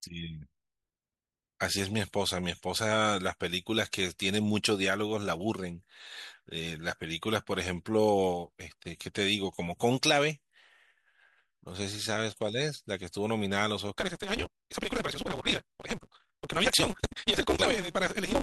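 Block size mismatch (truncated) affects this speech clip from 13.96 s to the end at 18.42 s. Each block is cut short on being read, which fits a 256-sample read, producing a 188 Hz buzz while the speech runs 1.88 times faster with its timbre kept.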